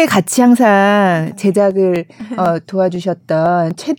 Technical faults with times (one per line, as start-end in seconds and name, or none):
1.71-3.71 periodic USB or driver dropouts